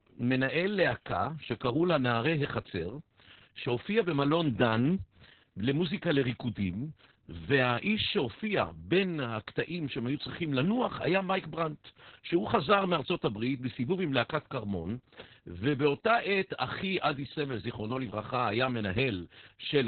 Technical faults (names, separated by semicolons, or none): Opus voice compression